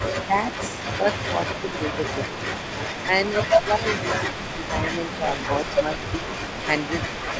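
Echo leak runs through the whole clip, from 0 to 7.4 s: a faint copy of the speech trails the main voice by about 0.4 s, sitting roughly 15 dB down. It is likely a loudspeaker echo that the far end's canceller failed to remove, sent back into the call.

Speech suppressed in double talk shows up at 0.27–0.34 s, 1.73–1.97 s, 2.33–2.39 s, 3.04–3.11 s, 3.52–5.26 s, 5.83–6.28 s and 7.1–7.27 s. The voice briefly sinks by around 5 to 15 dB, most deeply near 7.1 s and longest from 3.52 s. The canceller likely mistook the talker for echo and turned both down, within a band that stops at 8 kHz, consistent with G.722.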